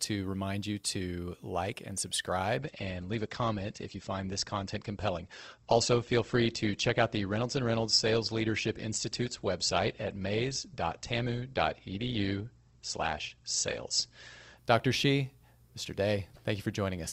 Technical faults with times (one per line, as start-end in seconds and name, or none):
2.57-14.57 adaptive stream at a lower bitrate